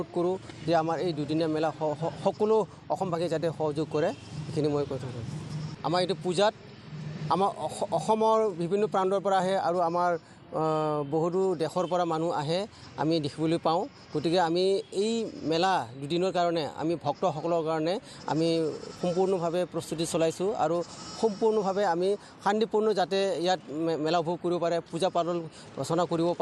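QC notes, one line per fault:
No faults found on this pass; nothing to log.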